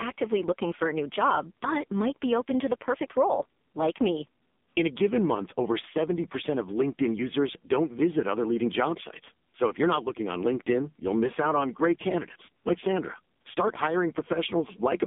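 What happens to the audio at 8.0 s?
At 8.0 s the speech sounds buzzy, boxed-in and synthetic, with nothing above 3.7 kHz and a thin band of roughly 200 Hz to 3.6 kHz. This is heavy AMR narrowband mobile codec damage throughout the clip, consistent with a low bitrate near 6 kbps.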